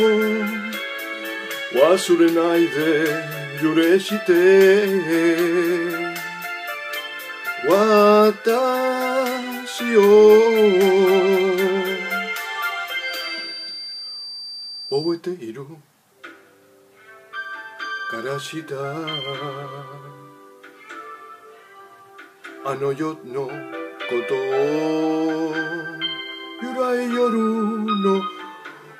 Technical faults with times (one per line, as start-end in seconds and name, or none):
12.97-15.22 feedback whistle